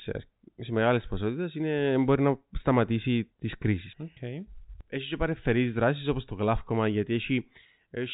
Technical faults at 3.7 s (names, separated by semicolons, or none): none